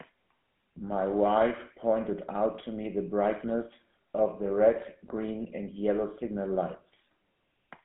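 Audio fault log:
Throughout: GSM full-rate codec. The speech has a plainly audible buzzy, gravelly roughness. It comes from a coder that models the vocal tract as a filter and drives it with a coarse, regularly spaced pulse train. Only every third excitation sample survives, so fine detail in the voice is replaced by a mechanical grain. The band sits within a phone line of roughly 150 Hz to 3.4 kHz. Nothing is present above 3.8 kHz, which fits the 13 kbps full-rate coder.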